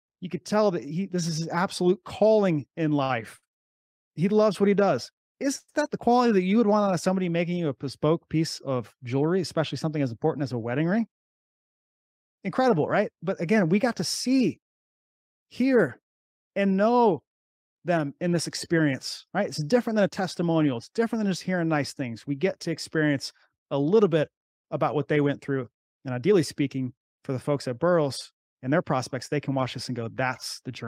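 From 3.03 to 5.70 s, packets arrived late and the jitter buffer ran dry three times, causing repeated stalls (stutter). The receiver stretched the last sound across about 210 ms in all, the longest wait 98 ms. Nothing is lost, but the speech drags and hiccups.

Later the buffer held too much audio, so a jitter buffer speed-up trimmed many tiny pitch-period slices, about a tenth of a second each time: 10.91 to 12.67 s at 105% speed, then 23.50 to 29.15 s at 102%. Speech sounds hurried in the first, pitch unchanged.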